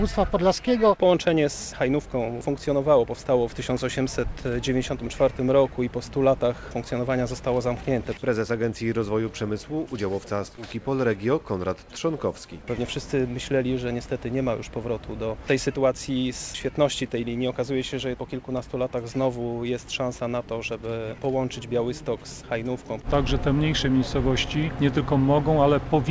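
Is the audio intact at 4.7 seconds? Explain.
Yes, the audio is intact at 4.7 seconds, with nothing there beyond the ordinary sound of a wideband call path whose content stops at 8 kHz.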